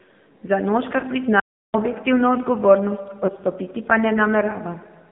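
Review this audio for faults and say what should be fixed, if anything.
The whole speech clip passes through the AMR narrowband mobile codec. Everything above 3.6 kHz and below about 150 Hz is missing, and the voice sounds plainly buzzy and synthetic, consistent with the 7.4 kbps mode. Prevent this by carrying the call over a wideband or higher-rate codec path.

Lost AMR speech frames occur at 1.0 s and 3.26 s. Each is a brief warble or dip where the decoder repeated the previous pitch and vocal-tract settings at reduced gain, which fits a single 20 ms frame lost to radio errors. Improve radio link quality or add error protection to reduce frame loss.

An audio dropout to silence runs from 1.40 to 1.74 s, about 340 ms. The sound cuts to silence with no room tone, likely because the input link or device briefly failed while the encoder kept writing silence. Secure the input connection and monitor the link for interruptions.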